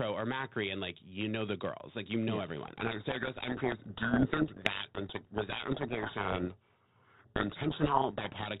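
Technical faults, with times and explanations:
2.66–8.47 s, codec payload misread: after "like you know yes" the speech drowns in harsh, grinding distortion because the decoder reads G.726 code words in reversed bit order.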